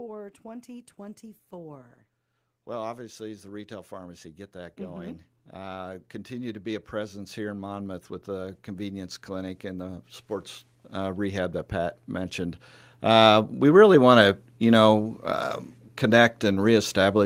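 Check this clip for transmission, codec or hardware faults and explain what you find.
Two stretches of automatic gain rising occur in this speech recording. From 2.66 to 10.1 s the level climbs by about 14 dB, and from 10.89 to 14.39 s, ending just before "you know uh", it climbs by about 7 dB. Each time the AGC judged the input too quiet and raised its gain gradually, so the voice and background noise swell together.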